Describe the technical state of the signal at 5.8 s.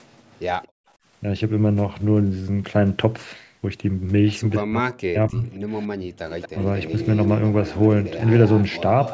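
At 5.8 s the signal carries an echo leak, running from 5.54 to 5.86 s. A faint, delayed copy of the speech trails the direct sound by about 228 ms, sitting far below it, around 25 dB down. The likely cause is a far end playing the call over a loudspeaker, where the echo canceller failed to strip out everything its microphone picked up and returned the residue down the line.

Immediately after, from 5.89 to 6.19 s, comes background gated by the echo canceller. For roughly 300 ms the room sound drops sharply, by up to about 28 dB, then recovers. This is the canceller's suppression stage clamping the microphone while it judges loudspeaker playback to be present, then releasing it. The band limit at 8 kHz reflects the call microphone processing.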